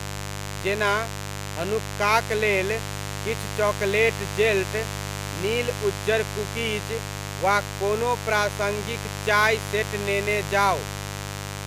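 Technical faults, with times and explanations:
Throughout, mains buzz: a steady, raspy buzz sits about 10 dB below the speech. Sharp switching spikes, twice per 50 Hz cycle, spread harmonics up to several kHz, which makes it brighter and edgier than plain hum's smooth low tone.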